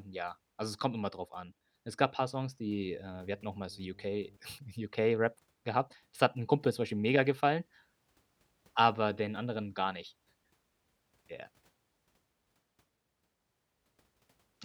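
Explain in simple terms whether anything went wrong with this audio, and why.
Between 2.87 and 4.37 seconds, a steady low buzz at 50 Hz sits faintly beneath the speech. This is mains hum: electricity from the power line leaking into the audio, typically through a ground loop or a nearby transformer, then stopping.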